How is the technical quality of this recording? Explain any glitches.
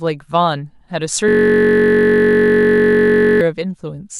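One serious glitch mars the recording. From 1.28 to 3.41 s comes a system hang loop: the driver froze, hardware kept replaying a 21.33 ms buffer, giving a steady 46.9 Hz buzz rather than silent gaps.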